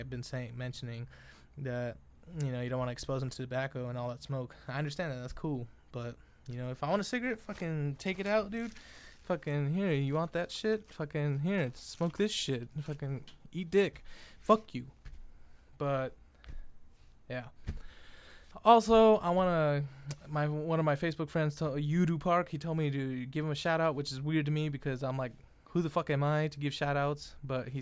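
Nothing in the audio stood out as a technical problem on listening.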